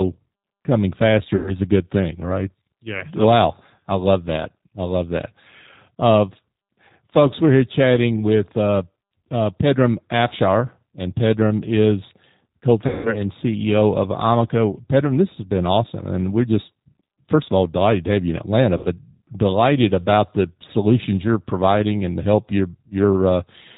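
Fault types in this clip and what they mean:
G.729 codec: harsh, slightly synthetic sound with nothing above 4 kHz, pointing to an 8 kbit/s coder; its roughness separates it from simple band-limiting.
VoIP packet loss concealed by the speech codec: at 1.36, 12.87 and 18.77 s, about 100, 180 and 80 ms stretch into a fading buzzy tone or coloured noise rather than silent dropouts, before "a good thing right" and "delighted about the solutions".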